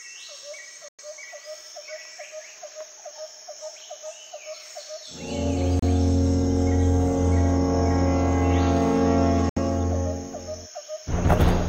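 At 0.88, 5.79 and 9.49 s the sound drops to silence for about 100, 30 and 70 ms, then resumes. This is likely a Bluetooth stall, where the headphone buffer ran dry.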